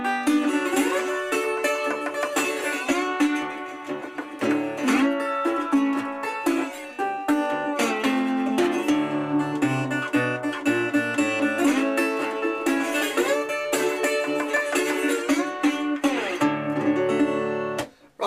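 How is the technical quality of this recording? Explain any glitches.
Nothing in the recording stands out as a glitch, so there's nothing here that needs explaining.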